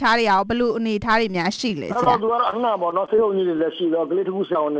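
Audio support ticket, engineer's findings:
Repeated packet loss (robotic sound), 1.56–2.57 s: eight short dropouts, longest about 22 ms. Concealment keeps patching them back to back, roughly an eighth of the stretch, so it turns choppy and robotic.

Short concealed packet loss at 3.06–3.10 s, 3.16–3.20 s and 4.53–4.57 s: about 20 ms lost each time. The decoder extends the last sound and blends back, leaving a brief smear or wobble. Top end stops at 8 kHz, which fits G.722 at 64 kbps on the call path.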